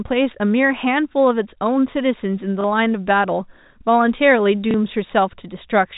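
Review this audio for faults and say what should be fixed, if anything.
Packet loss with last packet repeated at 2.61–2.64 s and 4.71–4.74 s: a 30 ms gap was filled by replaying the previous packet, heard each time as a small blip. Adding real packet loss concealment at the receiver and a jitter buffer on the network path would prevent these repeats.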